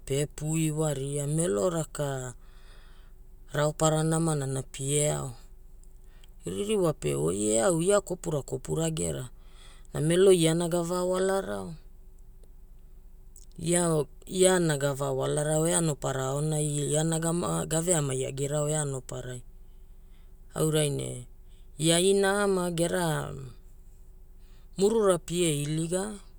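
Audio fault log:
Nothing stood out on listening to this speech recording.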